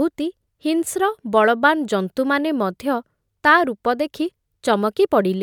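Nothing stood out on listening to this recording of speech.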